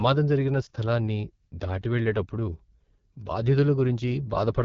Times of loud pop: none

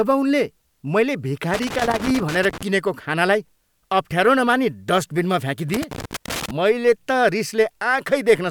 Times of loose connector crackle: 1.54-2.62, 5.74-6.51

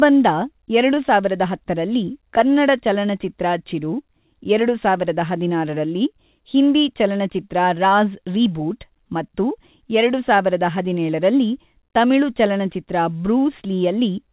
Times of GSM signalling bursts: none

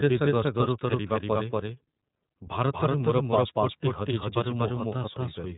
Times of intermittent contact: none

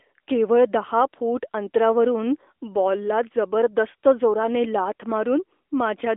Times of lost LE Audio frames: none

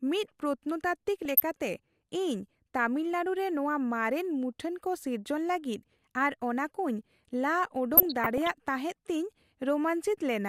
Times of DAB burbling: 1.25-1.41, 4.78, 7.94-8.48

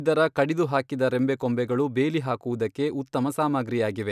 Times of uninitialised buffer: none

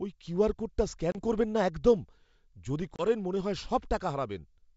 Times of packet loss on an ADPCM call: 1.12-1.18, 2.96-3.03

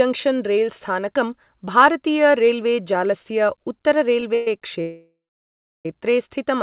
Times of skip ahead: none

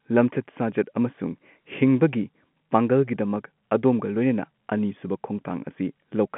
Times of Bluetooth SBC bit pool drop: none

